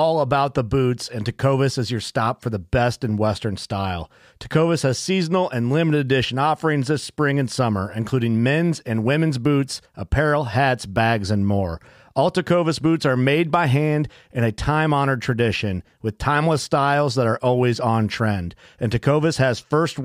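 Nothing stood out on listening to this speech recording.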